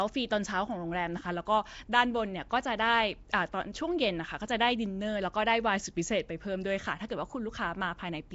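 Across the whole speech clip, the audio has a rough, hissy halo and a smeared, underwater character, and nothing is heard above about 7.7 kHz. This points to Nellymoser compression, likely from the old Flash microphone codec: it squeezes each short block of samples into a fixed two bits per sample, so weak bands get no bits and are filled in with noise. The damage is plainly audible, and the result fits a 32 kbps stream.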